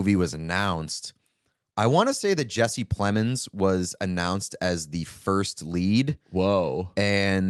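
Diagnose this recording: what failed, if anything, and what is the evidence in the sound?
Nothing in this speech recording has failed at any stage, from capture through playback. It has passed through a WebRTC call path working normally, and the top end stops at about 12 kHz with the usual coding texture, which fits the Opus codec at around 32 kbps.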